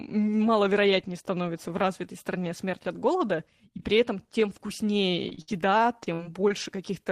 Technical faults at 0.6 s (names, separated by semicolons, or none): none